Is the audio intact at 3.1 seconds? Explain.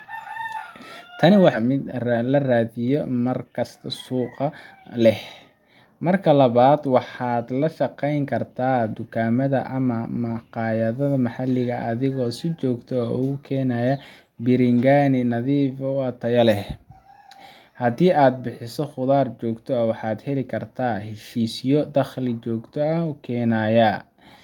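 No. From 1.63 to 4.81 s there is a jitter buffer speed-up: the receiver trimmed short pitch-period slices repeatedly to drain excess buffered audio, around 0.4 s in all. The speech runs at about 113% speed with unchanged pitch, sounding hurried.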